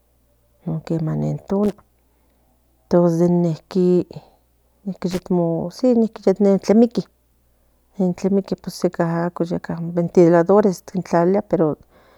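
A short burst of irregular crackle and scratching cuts into the speech from 1.64 to 1.73 s, just after "non quema nen", and again from 5.11 to 5.20 s. This is loose connector crackle: a worn or dirty contact flickering open and shut, chopping the signal into pops.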